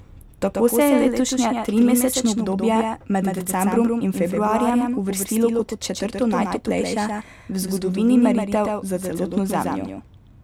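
Speech runs through a doubled audio track for the whole clip: a second, full-band copy trails about 150 ms behind, roughly 5 dB quieter, with no decay or room colour. A spectrogram shows every syllable repeated as a fainter, shifted twin. The likely cause is a second, slower capture path mixed in.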